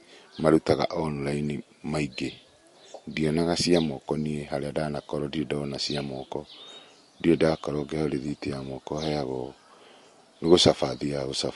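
From start to finish the speech carries plainly audible codec damage, likely from MP3 compression at a bitrate that fits around 48 kbps. Short of bits, the encoder drops weak frequency lines that flicker between frames, giving a watery, swirly texture and chirpy s sounds. Nothing survives above about 11.3 kHz. A plain low-pass filter would dull the treble just as sharply but leave no swirl or chirping beneath it.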